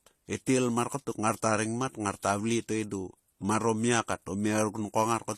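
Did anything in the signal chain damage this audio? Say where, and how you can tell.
Yes, at the codec stage, and throughout the speech: it was likely transcoded between lossy codecs, with AAC-style coding followed by HE-AAC at a low bitrate. The spectrum stops dead at 15 kHz for the whole clip, the lowest cut-off in the chain. Over that, the second encoder spends its bits reproducing the earlier coding artefacts and adds its own, so both sets of artefacts sit on top of each other.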